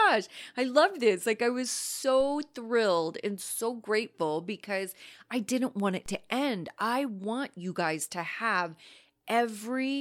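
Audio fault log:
2.21 s and 6.06 s, DC step: the waveform's zero line jumps by about -38 dBFS, first between "I was" and "thrilled and so grateful", then between "I didn't want it" and "to end I want". Each jump is heard as a single low thump. The offset then drains away as a 2 Hz high-pass decay over a few tenths of a second. Unlike a dropout or a digital click, the speech carries on intact across each step.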